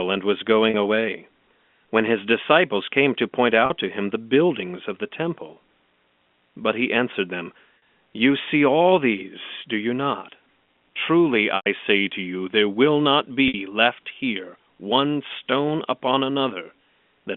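Packet loss with pitch repetition occurs six times, each bridged by replaying the last pitch period. There are 40 ms gaps at 0.70 s, after "and was", 3.66 s and 7.78 s. A 20 ms gap follows "buildings of the" at 5.54 s. There is a 60 ms gap at 13.48 s. Short gaps sound like a brief buzzy hold. The 100 ms gap at 11.56 s, before "say to you there", fades toward silence. All of this sits in narrow telephone-band audio.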